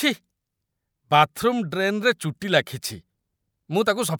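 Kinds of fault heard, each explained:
No faults are audible anywhere in this speech recording.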